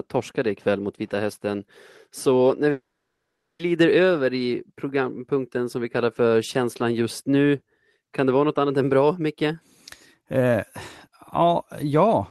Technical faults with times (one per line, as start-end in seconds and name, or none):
2.71-3.61 long network dropout